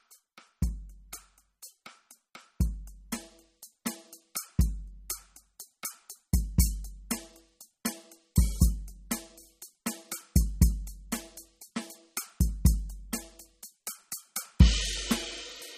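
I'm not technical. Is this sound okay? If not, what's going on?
No. The music was most likely squeezed hard by MP3 compression, a way of shrinking audio files that throws away detail it predicts you won't miss. Squeezed this much, it cuts off everything above about 15.3 kHz, so the top sparkle is gone, and it keeps dropping faint details in and out. Throughout the clip that gives a watery, swirly quality, metallic chirps on bright sounds, and smeared, softened hits.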